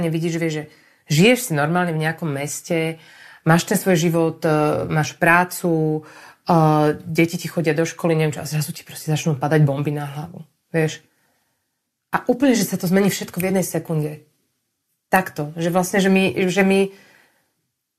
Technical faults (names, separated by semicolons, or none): none